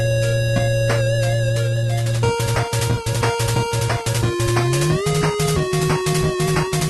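Nothing goes wrong here; the audio comes through the call path as a call normally would, with the codec trimming the top end at around 12 kHz.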